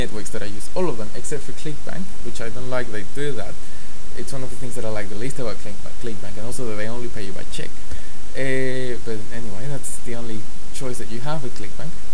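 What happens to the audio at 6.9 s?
Nothing goes wrong at 6.9 s; the audio plays through that moment intact, with no dropout, click or other fault.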